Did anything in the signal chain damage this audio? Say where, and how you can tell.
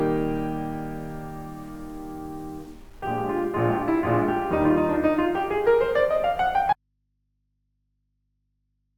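Yes. Low bit depth without dither runs through the whole music clip. Quiet passages turn grainy, and the grit rises and falls with the music, sitting roughly 35 dB below it. The likely cause is truncation to 8 bits during sample-format conversion, with no dither to decorrelate the error.

An audio dropout to a faint residue starts at 6.73 s and lasts to the end. The music stops abruptly, not as a fade. Only a mains hum remains, about 50 dB down. That points to a likely break in the analogue wiring, leaving a live, open input.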